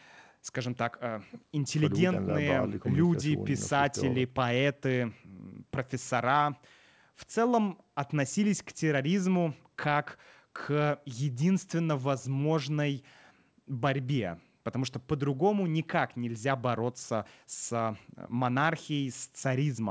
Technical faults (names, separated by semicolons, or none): none